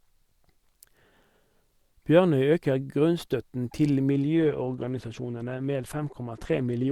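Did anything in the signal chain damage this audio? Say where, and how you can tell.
Yes. From 4.11 s to the end of the clip, the speech suddenly loses its top end, with nothing left above 12.1 kHz, and sounds thinner, with more codec artefacts. The switch is abrupt and there is no gap. This is an adaptive stream at a lower bitrate, a network-stage fault. The connection slowed and the player switched to a cheaper encoding, which fits Opus stepping down from about 64 to 16 kbit/s.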